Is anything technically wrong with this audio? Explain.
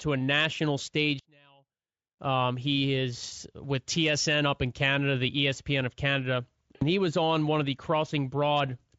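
Yes, there are two faults.

From 1.19 to 2.19 s the speech drops by about 34 dB and becomes a faint residue, with the centred body of the voice nearly gone. The likely cause is one channel inverted. With one stereo channel's polarity reversed, summing to mono cancels everything the two channels share. Only the small difference between them survives, so near-identical channels leave almost nothing for this second.

From 6.75 to 6.83 s there is VoIP packet loss concealed by the speech codec. About 60 ms of audio is missing, which fits three 20 ms frames. The Speex decoder fills the gap by extending its last pitch and spectral envelope while lowering the gain each frame. The result is a short buzzy tone or coloured noise that fades, and the speech stays weak as the decoder recovers. Speex coding damage elsewhere is faint or inaudible.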